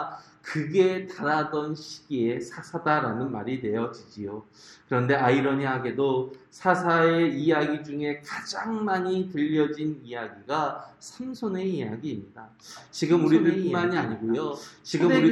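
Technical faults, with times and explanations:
12.76 s to the end: doubled audio track. A second, full-band copy of the sound cuts in abruptly, about two seconds behind and roughly as loud as the original. It has no decay or room colour, which likely points to a slower second capture path or a misaligned edit.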